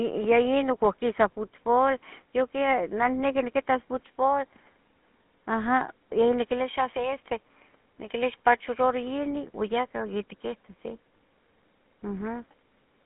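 Throughout, GSM full-rate codec damage: pulse-driven coding adds a gravelly buzz, fitting a 13 kbps stream, unlike plain band-limiting's clean 200 Hz to 3.5 kHz narrowness.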